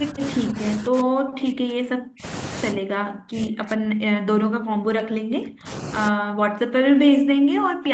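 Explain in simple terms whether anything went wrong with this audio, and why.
Speech suppressed in double talk, from 0 to 0.23 s, 0.46 to 0.61 s, 0.77 to 2.25 s, 2.73 to 5.7 s and 6.1 s to the end: the speech dips at first, then almost vanishes. Likely cause: the echo canceller couldn't tell this talker from the other side's echo, so it turned both down.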